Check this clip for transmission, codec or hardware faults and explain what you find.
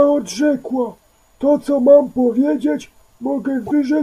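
One transmission fault is present, near the end of the speech. Repeated frames, from 3.65 to 3.72 s: one compressed block of 26.1 ms was delivered twice, so the decoder replays it. The result is a brief stutter, lengthening the audio by 26.1 ms.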